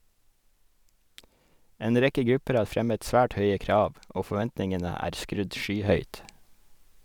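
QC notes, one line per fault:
5.89–7.05 s, sudden gain jump: speech and background noise rise together by about 6 dB and hold, likely a gain change applied without a ramp.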